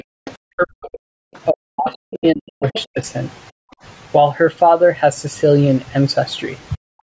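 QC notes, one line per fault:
0.0–2.98 s and 6.76–6.9 s, speech suppressed in double talk: the talker dips by up to about 40 dB, in pieces totalling around two seconds early on, then briefly near the end. The echo canceller likely clamped down while both sides spoke. On a spectrogram the speech harmonics thin and break off. The waveform shows gouged, collapsed envelopes.
0.25–0.34 s, 1.35–1.39 s, 1.88–1.95 s, 2.73–2.84 s, other side's voice leaking through: short scraps of a second voice, about 15 to 35 dB below the talker, likely residual loudspeaker echo the canceller missed. They show as faint, chopped harmonic fragments sitting under or between the main speech traces.
3.51–3.83 s, background gated by the echo canceller: the room sound drops by about 40 dB for roughly 0.3 s, then returns once the canceller releases the microphone. On a spectrogram there is a near-blank vertical gap in the noise floor, and on the waveform a flat, squashed stretch.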